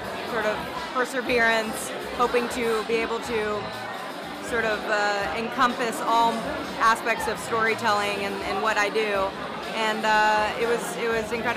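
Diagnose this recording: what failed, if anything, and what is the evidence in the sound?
Nothing in the signal points to a failure at any stage, from capture and conversion through transmission, storage and playback: the level, continuity and timing of the audio hold steady throughout, with no dropouts, distortion or discontinuities to trace.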